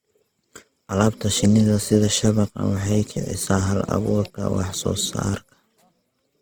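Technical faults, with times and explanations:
Throughout, Opus compression: speech sounds rough and grainy, noise-filled rather than swirly, likely a CELT-mode encode near 16 kbps; bandwidth stays full, unlike SILK's muffling.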